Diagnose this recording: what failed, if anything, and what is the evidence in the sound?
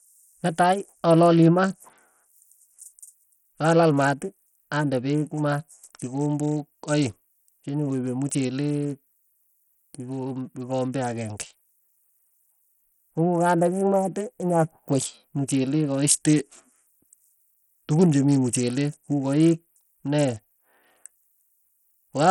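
The codec stage failed, most likely through Bluetooth SBC compression. Throughout the speech the treble is unstable, dropping out and flickering, with a gritty noise and aliasing riding on the sound, and nothing above 19.4 kHz. The damage is heavy, which fits a low bitrate of around 64 kbps. SBC splits the signal into a few wide sub-bands and shares bits without a hearing model, so at this rate the weaker top bands starve and the rest are coarsely quantised.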